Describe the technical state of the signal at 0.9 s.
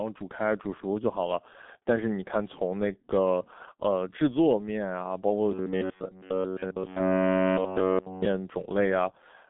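At 0.9 s the speech carries G.723.1 codec damage, which runs through the entire clip rather than starting or stopping there. The codec rebuilds the speech from a slowly updated voice model in 30 ms frames, and the heavy smearing fits a very low rate near 6 kbit/s. The band sits roughly between 200 Hz and 3.5 kHz, with nothing above 3.8 kHz, so the speech sounds muffled and hoarse, with blurred consonants.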